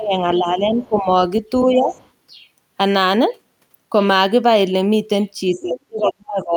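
A speech recording in which the talker's level sinks by around 15 dB from the start to 1.09 s and again from 1.65 to 1.92 s, then falls by as much as 35 dB from 5.57 s to the end. This is speech suppressed in double talk, most likely the echo canceller mistaking simultaneous speech for loudspeaker echo and turning everything down. A second voice also leaks through faintly, around 25 dB below the talker, at 0.77–0.88 s, 1.88–2.09 s and 5.53–5.62 s. This is the other side's voice leaking through, likely loudspeaker echo the canceller failed to remove.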